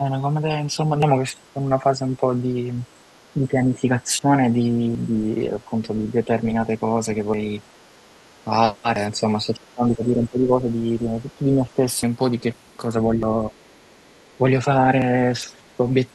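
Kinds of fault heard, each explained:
Speech suppressed in double talk: the speech dips by up to about 15 dB in patches during the first 13 seconds, likely the echo canceller ducking it while both sides talked.
Dropped buffer (overrun): sudden jumps forward at seven points, mostly skipping roughly 100 ms, once 150 ms and once 300 ms, likely unread samples overwritten and the ends spliced together.
Other side's voice leaking through: faint scraps of a second voice, mostly about 40 dB below the speech and once about 20 dB, likely loudspeaker echo the canceller missed.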